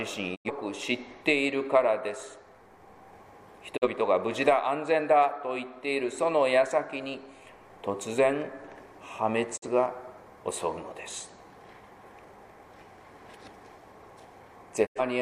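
At 0.34 s, 3.76 s, 9.56 s and 14.85 s there are digital broadcast dropouts: the receiver stopped getting valid frames and muted, each time with a 20 ms fade down and back up. The holes lasted 0.16 s, 0.12 s, 0.11 s and 0.15 s, with lost stretches of about 85 ms and 43 ms that fit one or two missing frames. Unlike packet-loss concealment, nothing is repeated or smeared over the gaps, and unlike a tape dropout, the level doesn't sag or dull first. The sound is simply gone, then returns further along.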